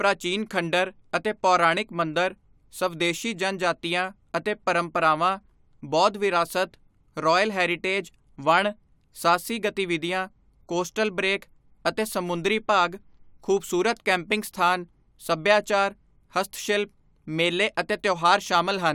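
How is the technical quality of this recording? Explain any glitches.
The technical quality of the recording is sound, with no glitches to explain.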